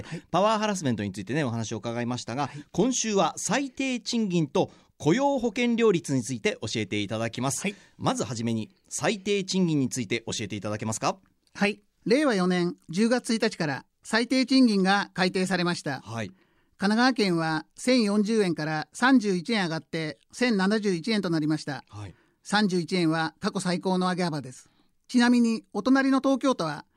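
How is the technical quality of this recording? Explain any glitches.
No glitches turn up here at all; it's a clear speech recording with nothing that trips the ear.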